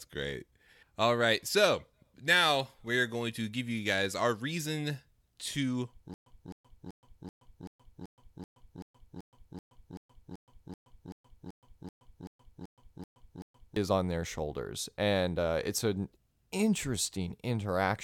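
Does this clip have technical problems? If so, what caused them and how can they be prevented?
Yes. From 6.14 to 13.76 s the speech falls into a stutter with silent gaps: the same 260 ms fragment repeats 20 times, each followed by 123 ms of digital silence, on a steady 383 ms cycle. Unlike simple dropouts, identical audio returns each time, likely from a stalled stream replaying its last buffer before running empty. Deeper playback buffering and a steadier network connection would prevent it.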